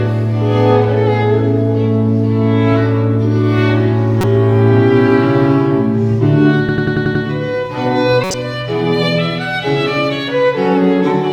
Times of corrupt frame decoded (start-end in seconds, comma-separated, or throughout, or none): 4.21-4.24, 8.24-8.34